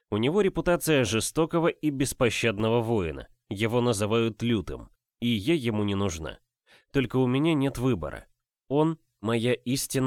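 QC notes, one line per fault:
2.60 s, block of digital silence: about 3 ms of the signal drops to silence and returns with no fade, so the hard edges are heard as a single tick. This fits a 128-sample output buffer not filled in time. The waveform shows a flat line, the spectrogram a thin broadband vertical stripe.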